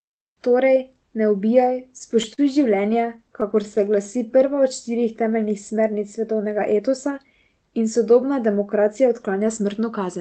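Speech carried over a call link, with Opus coding noise and a cut-off at 8 kHz that fits a low bitrate near 20 kbps. Repeated stalls (stutter) occur twice. From 1.99 to 2.40 s, right after "ne ubijaj", four brief holds stretch the sound, the longest 40 ms. From 2.82 to 3.79 s, nine shorter holds of up to 13 ms follow. Packets arrived too late, so the receiver extended the last sound each time. Nothing is lost, but the speech drags. A jitter buffer slow-down runs from 3.85 to 4.61 s, just before "od štirih temeljnih smernic". Playback drops to 91 percent speed at unchanged pitch. Repeated pitch periods add 76 ms to rebuild a drained buffer. A jitter buffer speed-up follows at 6.72 to 7.25 s, after "štirih temeljnih smernic svetovnega". Speech runs at 112 percent and sounds hurried. Trimmed pitch periods remove about 70 ms of excess delay.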